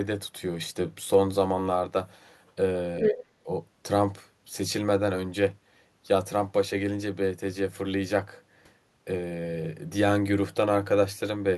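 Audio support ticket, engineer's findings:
Other side's voice leaking through, 3.01–3.13 s. A second talker's sound is audible at about the same level as the near-end speech, short and scrappy. The likely cause is residual echo that the echo canceller failed to subtract from the mic signal. On a spectrogram, a second harmonic stack overlaps the main one. On the waveform, the envelope shows no dip, so the leak sits on top of the speech.

Speech suppressed in double talk, 3.11–3.48 s, right as the leak ends. The near-end level dips, at its deepest around 25 dB down, for roughly 0.3 s in total. During overlap, the echo canceller or suppressor probably misjudged double talk and attenuated everything. On the waveform, the envelope is hollowed out. On the spectrogram, the energy is faded.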